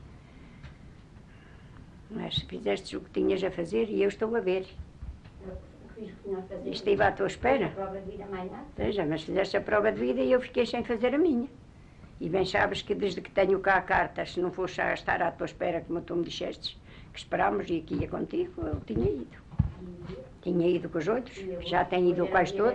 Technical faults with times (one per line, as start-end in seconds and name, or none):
none